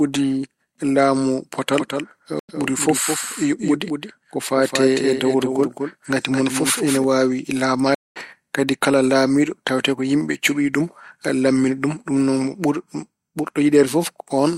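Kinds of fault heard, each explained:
Doubled audio track: A likely second capture holds a copy of the speech, about 5 dB quieter and roughly 200 ms late, from 1.73 to 7.04 s.
Stream reconnect: The connection dropped and a fresh decoder restarted. Silences of 93 ms at 2.39 s and 210 ms at 7.95 s each resume slightly further on.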